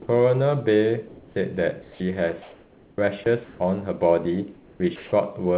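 Speech, heard through a narrowband call path with nothing above 4 kHz, which fits G.711 mu-law at 64 kbps. Right at the start, from 0.02 to 0.08 s, there's sound dropped by the voice detector: about 60 ms gives way to steady synthetic noise, and roughly 30 ms of the opening sound goes with it. The sender's detector likely heard that onset as background and stopped transmitting, so the far end filled the gap with RFC 3389 comfort noise until the detector caught up. Between 1.08 and 3.6 s the sound is chopped by the voice detector. About 1.2 s in total is swapped out in pieces, so quieter bits and word edges drop into a smooth hiss and back again. That's likely the detector toggling on and off several times over the stretch. From 4.54 to 5.12 s there's comfort noise in place of the background, about 420 ms of it. The genuine ambience, with its texture, is replaced by a featureless, even noise, which is likely discontinuous transmission kicking in during the pause. 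Inside that stretch, from 4.96 to 5.12 s, there's another patch of sound dropped by the voice detector, with about 160 ms filled and roughly 80 ms of actual sound lost under the fill. Here the detector likely missed quiet speech and kept the comfort noise running over it.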